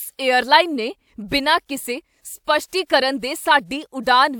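Nothing stood out as a technical problem on listening to this recording of speech.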